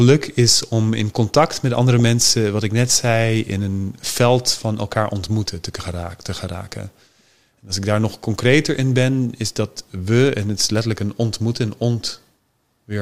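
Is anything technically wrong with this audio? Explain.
Yes. At about 2.00 s in this speech clip, between "in contact met andere" and "mensen wat ik net", there is a brief burst of DAB burbling. With marginal reception, a small share of bits, around 0.2 percent, slip past error correction into the MP2 stream. Wrong samples then put short blips of noise into single sub-bands, which fits a handful of damaged frames. It sounds like a short burbling noise over the speech. It is not a clean dropout or a single click, because only some frequency bands are distorted.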